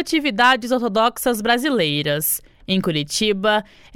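No technical faults can be heard in this clip.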